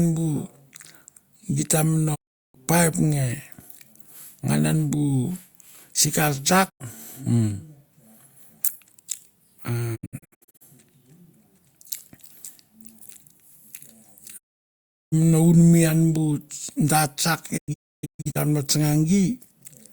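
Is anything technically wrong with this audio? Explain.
Yes. Digital broadcast dropouts occur at 2.14–2.56 s (ending before "paip nge"), 6.68–6.82 s (after "sikar tsak"), 9.95–10.63 s, 14.36–15.14 s and 17.56–18.37 s (after "da tsak"). The receiver lost valid frames and muted. Each gap fades out over 20 ms. The 9.95 s and 17.56 s events break into several short holes. Missing speech never returns.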